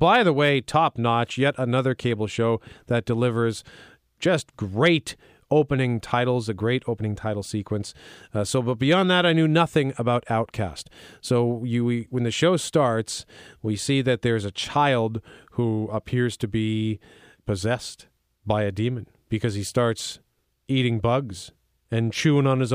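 Listening to the speech in this recording, nothing technical stood out as a problem at any point.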